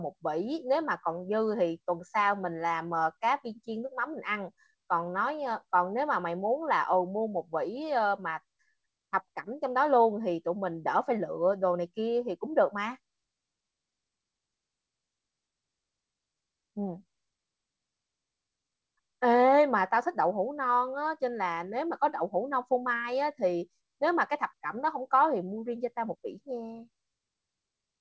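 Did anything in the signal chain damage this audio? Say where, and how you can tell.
No, nothing in the chain stood out as damaging this speech on listening; it carries the band limit of a G.722 call path at 64 kbps, with nothing above 8 kHz, which is how that path normally sounds.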